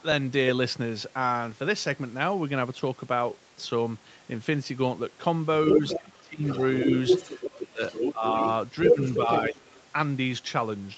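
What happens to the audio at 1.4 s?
Nothing goes wrong at 1.4 s: the speech there is intact, carried through the call's microphone processing and Opus codec with the high end stopping at 8 kHz as the call path normally does.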